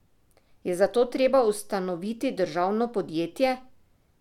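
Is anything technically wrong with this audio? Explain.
No, nothing technical stands out in this speech recording, so there's nothing here to flag.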